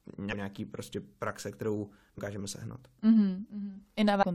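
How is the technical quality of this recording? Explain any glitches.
Three brief glitches interrupt the speech, at 0.28 to 0.33 s, 2.14 to 2.20 s and 4.18 to 4.23 s, each lasting about 50 to 60 ms. These are damaged data in a compressed stream: bytes in the encoded file were lost or overwritten, so the decoder misread those frames, lost sync, and had to hunt for the next valid frame header before normal audio resumed.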